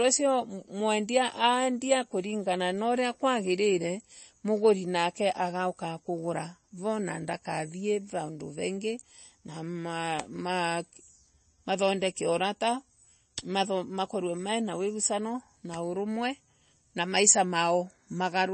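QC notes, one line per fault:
Throughout, MP3 compression: the speech sounds plainly watery and swirly, with sibilants turning into metallic chirps and consonant attacks smeared, and nothing is present above about 8.3 kHz. This is likely heavy MP3 encoding, fitting a bitrate around 32 kbps, where the encoder runs short of bits, cuts the treble at a fixed point and drops quieter frequency lines that flicker on and off between frames.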